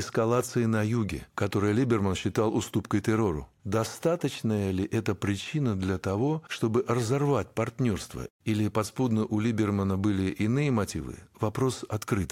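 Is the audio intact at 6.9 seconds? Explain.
Yes, the speech runs intact through 6.9 seconds, with no dropout, click or other fault at that point.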